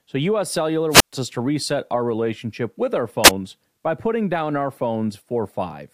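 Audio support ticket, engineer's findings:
Brief hiss swell, then a dead hole in the speech, at 0.90–1.13 s (muted about 125 ms) and 3.24–3.30 s (mute near-instant). Cause: wireless microphone squelch dropout, analogue FM signal fading until receiver squelch gates output. Check antenna placement, RF path.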